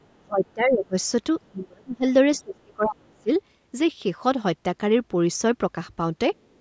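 Other side's voice leaking through appears faintly at 0.02–0.16 s, again at 0.47–0.53 s and 1.42–1.49 s, and finally at 6.52–6.59 s: brief scraps of a second voice sitting about 40 dB under the speech, likely loudspeaker echo the canceller failed to remove. Speech suppressed in double talk follows at 0.17–0.95 s, 1.49–2.05 s and 2.38–3.30 s, where the talker dips by up to about 30 to 35 dB. Here the echo canceller likely mistook the talker for echo while both sides spoke, pulling both down.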